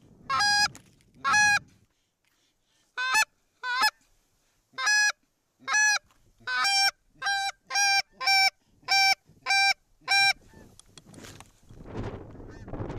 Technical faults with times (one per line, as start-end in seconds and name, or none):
none